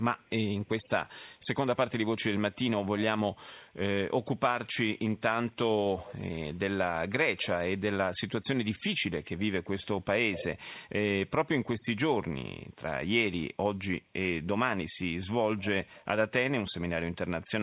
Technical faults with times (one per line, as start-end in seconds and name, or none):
0.18-0.30 echo leak
0.62-1.47 echo leak
5.50-5.55 echo leak
9.23-9.85 echo leak
10.32-10.44 echo leak
15.87-16.05 echo leak